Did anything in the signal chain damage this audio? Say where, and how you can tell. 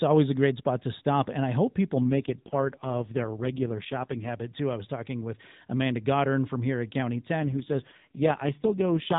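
Yes. An AMR rate drop at the network and codec stage runs from 2.02 to 4.32 s and again from 7.40 s to the end: the speech turns buzzy and synthetic with no gap or band change, which fits a drop from 12.2 to 4.75 kbps.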